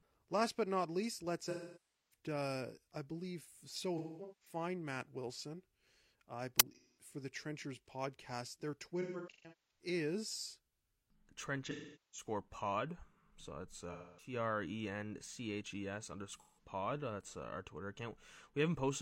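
This is a speech recording with two kinds of fault. The main one is AAC frame loss with concealment, hitting seven times: 1.44–2.15 s right after "but not least", 3.98–4.55 s after "I believe so", then 6.75–7.07 s, 9.01–9.85 s, 11.64–12.27 s, 13.92–14.33 s and 16.34–16.64 s. Each time the decoder loses frames and patches over them from the last good spectrum, so you get a smeared, noisy, phasey stretch instead of clean speech. The dropouts add up to anywhere from about 170 ms to nearly 600 ms per event, in steps that fit frames of roughly 43 ms. In the 3.98 s and 9.01 s patches the losses are scattered rather than continuous, with the longest run around a fifth of a second. Separately, at 6.60 s there's an uninitialised buffer. A roughly 10 ms block went out before any audio was written into it, so leftover memory got played as samples. That comes through as a loud crack, just before the 6.75 s concealment patch.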